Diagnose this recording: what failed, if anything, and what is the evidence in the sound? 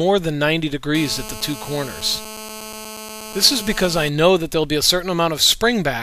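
The failure is in the analogue wiring: GSM phone buzz from about 0.95 s to 4.09 s. A hard, raspy buzz at about 217 Hz sits roughly 14 dB below the programme and holds steady throughout, as it would during a call. A nearby 2G handset's transmit bursts are rectified by the audio circuitry. On a spectrogram this shows as a dense comb of harmonics at 217 Hz multiples; the waveform carries a regular pulse train every 4.6 ms.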